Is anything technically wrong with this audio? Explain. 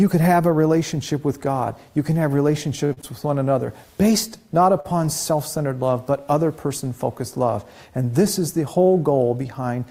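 Yes. There are three short stalls from a late packet, at 2.85 to 2.93 s, 2.93 to 2.99 s, and 4.80 to 4.86 s. Each time a packet arrived late and the jitter buffer ran dry. The last sound was stretched for about 55, 40 and 41 ms, then playback resumed with nothing lost. You hear a held sound with a faint buzz or dip.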